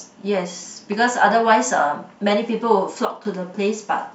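At 3.05 s a sudden gain jump drops speech and background noise together by about 9 dB until 3.25 s, likely an unramped gain change, showing as square-edged waveform steps and a uniformly dimmed spectrogram band.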